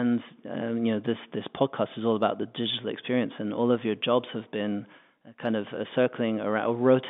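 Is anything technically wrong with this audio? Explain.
No, nothing is technically wrong with this speech. It has the narrow band of a telephone line running from about 200 Hz to 3.6 kHz, which fits ordinary G.711 telephone coding working as intended.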